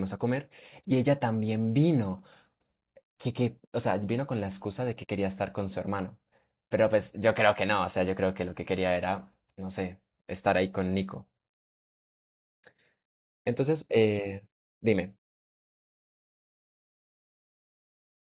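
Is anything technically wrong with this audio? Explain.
No, nothing in this speech clip sounds technically wrong. It has come through a call path whose narrowband sound, with nothing above 4 kHz, fits a telephone codec such as G.711 mu-law working as intended.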